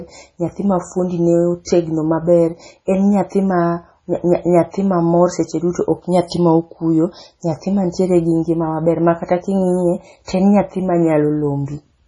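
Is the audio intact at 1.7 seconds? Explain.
No. From 1.65 to 1.67 s, just before 1.7 s, there is pre-echo. The codec's transform block held a sharp attack near its end, and the quantisation noise meant for that loud onset was spread across the whole block, including the quiet stretch ahead of it. The result is a brief hiss, about 22 ms long, leading into the attack, which then lands soft and smeared instead of crisp.

That moment also carries the damage heard across the whole clip, likely from heavy MP3 compression at a very low bitrate, around 24 kbps judging by how starved it sounds. The encoder has cut all content above 10.5 kHz and dropped weak frequency lines that flicker in and out between frames. The speech therefore sounds dull and watery, with swirling, metallic chirps on sibilants and softened onsets.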